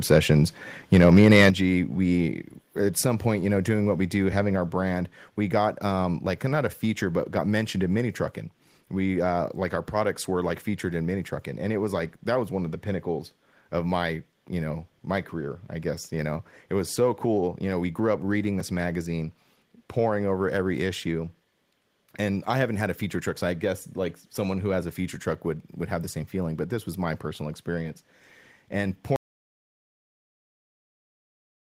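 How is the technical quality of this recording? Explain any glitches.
The recording has three technical problems, all near the very start or the very end of the speech.

Microphone overload appears twice in the first second and a half, briefly at 0.11 to 0.18 s and more heavily at 0.93 to 1.49 s. The peaks run about 2 dB and then about 6 dB past the converter's limit, and a few percent of samples are flattened. The cause is likely an input volume set too high, so the converter chops the waveform tops. The result is a harsh, gritty crackle that rides on the loudest syllables. That distinguishes it from codec distortion, which smears the sound rather than tearing at the peaks.

The microphone volume steps down at 1.5 s, right after the longer overload. The level falls by 8 dB in one abrupt move and stays there. The likely cause is the call software reacting to the clipping by cutting the device's input gain. 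Voice and background drop together, which separates it from a speaker simply moving away or talking more softly.

An audio dropout to silence begins at 29.16 s and runs to the end. The sound cuts off mid-flow into silence with no room tone at all. The likely cause is the input being lost while the recorder kept writing silence. The complete absence of background hiss separates this from a natural pause, which would keep the room noise underneath.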